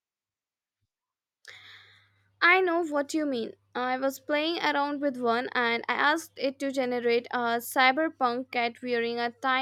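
Speech, with nothing technically wrong that a listener can hear.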